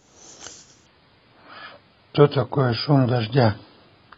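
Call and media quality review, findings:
Adaptive stream at a lower bitrate from 0.86 s: sudden quality drop and codec artefacts, fitting a drop to 16 kbit/s AAC. No gap, unlike packet loss.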